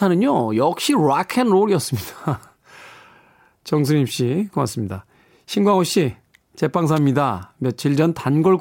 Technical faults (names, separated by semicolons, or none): electrical switching spike